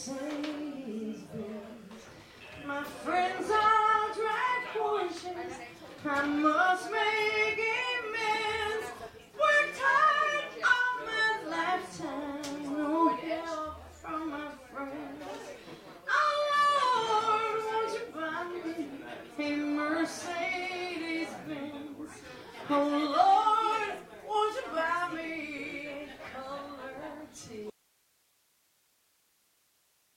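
At 27.7 s the sound cuts out abruptly and never returns, leaving only hiss roughly 40 dB below the programme level to the end. This audio dropout to a faint residue points to a likely break upstream while the downstream path stayed live.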